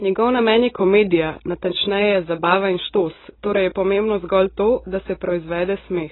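From start to end, the speech is band-limited with nothing above 4 kHz, sounding dull, smeared and warbly on sustained sounds and sibilants. This is likely heavy AAC compression, where the encoder drops high bands and coarsely quantises the rest, which fits a bitrate around 16 kbps.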